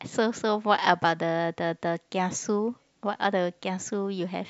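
A short speech recording with no technical fault to report. Nothing in it calls for a time stamp or a cause.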